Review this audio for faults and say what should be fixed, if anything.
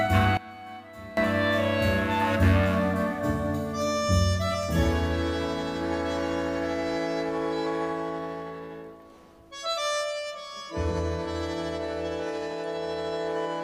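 From 0.37 s to 1.17 s the sound collapses to a faint trace. It drops by about 20 dB. Anything shared by both channels disappears, and only their differences remain. That behaviour points to one channel inverted, likely. With one side's polarity flipped, the common content cancels wherever the channels are summed. To prevent it, check polarity on every stereo path and confirm mono compatibility before delivery.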